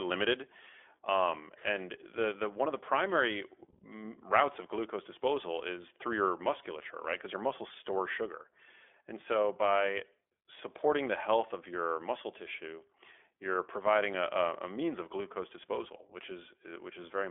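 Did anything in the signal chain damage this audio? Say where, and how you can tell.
Yes. The codec stage damaged it, across the whole clip: the speech is confined to 300 Hz to 3.5 kHz and sounds plainly rough and synthetic. That is iLBC, coding each 20 ms frame's excitation independently, consistent with its 15.2 kbps mode.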